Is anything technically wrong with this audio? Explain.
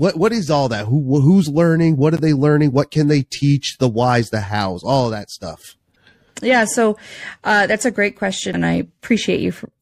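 Yes, there's damaged data in the compressed stream, hitting this speech three times: 2.17 to 2.20 s, just before "they learning"; 5.94 to 5.96 s, right after "hows all that stuff"; and 8.51 to 8.56 s, after "uh that's a great". Each time the decoder hits corrupted bytes, misreads or drops those frames, and loses sync until it finds the next valid header. You hear it as a short chirp or blip, only a few tens of milliseconds long.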